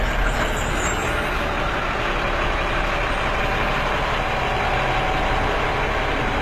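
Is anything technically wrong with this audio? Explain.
Yes. Throughout, the treble sounds gritty and metallic, with nothing above 14.9 kHz, likely HE-AAC compression rebuilding the top by copying lower bands upward, which fits roughly 20 kbps.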